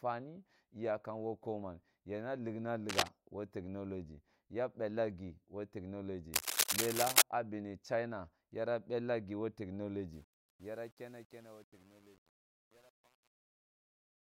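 At 2.89 s, just after "koman yira rikna", a burst of cable scratch noise runs to 3.08 s. The speech resumes with "woh technology ya bella". A second burst runs from 6.34 to 7.22 s, ending just before "ah bemi". Both are dense, uneven crackles that sit about 5 dB above the speech level. They sound like scratching over the voice. The likely cause is a worn cable or connector being moved, so its contact resistance jumps around rapidly.

From 10.13 s to the end, the fade-out shows truncation distortion. Almost at once, by 10.19 s, the low-level detail turns grainy. As the level drops, the waveform collapses into coarse steps. The tail becomes gritty. This fits a fade computed at about 9 bits with no dither.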